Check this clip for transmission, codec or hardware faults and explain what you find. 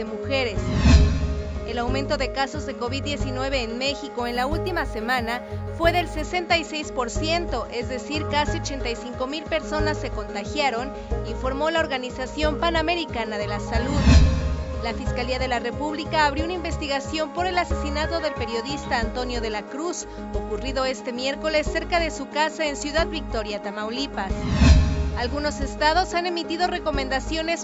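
Imaging from linear upsampling runs from 4.23 to 6.22 s. The rate was raised by straight-line interpolation between samples, which fits a jump from 16 kHz to 44.1 kHz. That weak filter softens the top of the original band and leaves mirrored copies of the spectrum above it, the first spanning 8 kHz to 16 kHz, roughly 30 dB below the signal. The result is a dulled top end with a faint metallic shimmer riding on the high frequencies.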